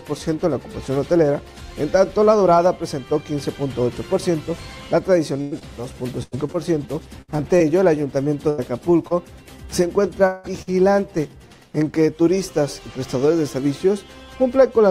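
From 5.41 to 9.12 s there's a stretch of repeated packet loss, the robotic kind. Roughly ten short holes land one after another across those nearly four seconds, the longest about 99 ms, and each one gets papered over by stretching out whatever sound came just before. About 12 percent of that span ends up concealed, so the sound goes choppy, with little bits missing all the way through.

At 10.26 s there's a longer break, running about 0.2 s to 10.46 s. What you hear is the last bit of sound carried on as a buzzy, fading fill, about 180 ms worth, and then the audio picks up again further along with that chunk gone. It never drops to true silence. The likely cause is a long network dropout where the audio simply didn't arrive in time to be played.

Right after, from 10.62 to 10.69 s, comes a quick burst of packet loss, roughly 40 ms missing. Same trick on a smaller scale: the receiver holds the previous sound for about 50 ms and turns it down as it goes, so you get a short held buzz or fading hiss, then the audio jumps ahead past the lost piece.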